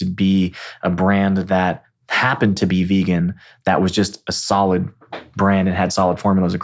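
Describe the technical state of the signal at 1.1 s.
The audio at 1.1 s is intact, with no technical fault audible at that moment.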